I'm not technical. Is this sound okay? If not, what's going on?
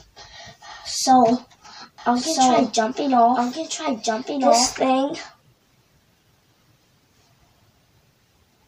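No. From 1.98 to 4.76 s there's a doubled audio track: a quieter copy trails about one and a half seconds behind, likely from a second capture or a misaligned edit. Unlike an echo, it never fades and starts and stops abruptly.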